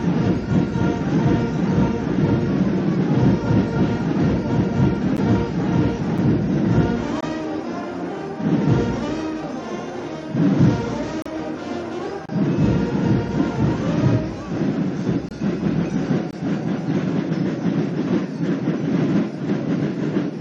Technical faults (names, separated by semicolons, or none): gap between stream segments